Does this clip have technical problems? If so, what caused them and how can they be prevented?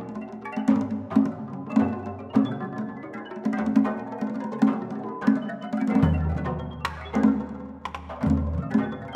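No, nothing here sounds off technically, so there's nothing that needs fixing or preventing.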